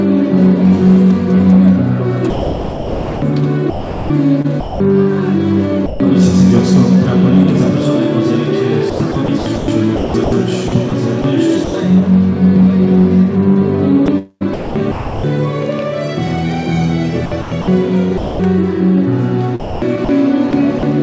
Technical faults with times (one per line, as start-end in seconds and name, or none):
2.30-4.80 sound chopped by the voice detector
5.86-6.00 sound dropped by the voice detector
8.90-11.74 sound chopped by the voice detector
14.06-15.24 sound chopped by the voice detector
17.26-18.40 sound chopped by the voice detector
19.60-20.83 sound chopped by the voice detector